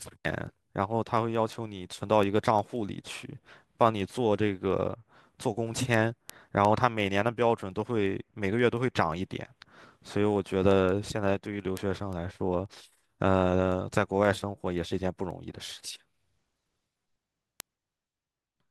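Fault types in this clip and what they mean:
Word clock ticks: Sharp ticks run through the whole speech clip, from about 0.11 s to 18.66 s, arriving roughly every fifth of a second, so around a hundred in all. The receiving gear is running on its own clock rather than locking to the sender's. Each time the two clocks drift a sample apart, one sample gets dropped or repeated and you hear a tick. That pace suggests the clocks disagree by something like 100 ppm.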